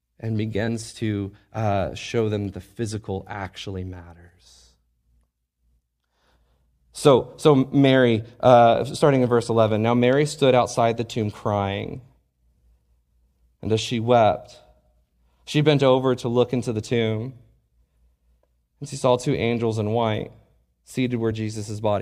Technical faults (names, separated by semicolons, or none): compressed frames skipped